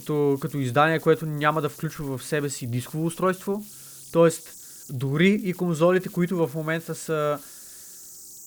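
Throughout the speech, converter idle tones sit underneath at about 23 dB below the signal. The delta-sigma converter is running without dither, so when the level drops low its modulator settles into repeating bit cycles instead of random-looking noise. Those cycles produce a whistle somewhere around 7 kHz that emerges in the pauses between phrases, while beneath quieter syllables the same mechanism leaves a grainy texture clinging to the speech.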